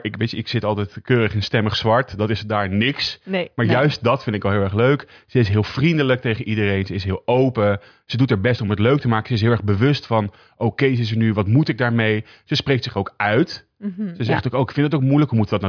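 No technical faults are audible anywhere in the recording.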